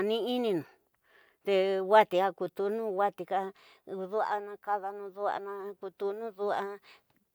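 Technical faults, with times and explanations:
No technical faults can be heard in this speech clip.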